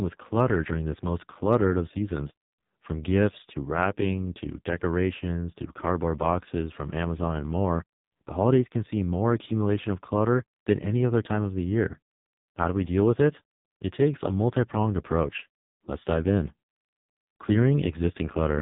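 Throughout, the speech carries heavy AMR narrowband mobile codec damage: nothing passes above 3.8 kHz, and the buzzy, synthetic vocal-tract rendering points to a low mode near 5.15 kbps.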